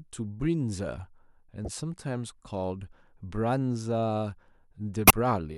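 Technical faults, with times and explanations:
1.65–1.68 s and 5.07–5.11 s, corrupt frame decoded: damaged compressed frames were decoded anyway, so misread gains and codes put energy at the wrong frequencies. The result is a brief blip across a couple of frames near about -25 dBFS, then a louder burst near about -10 dBFS.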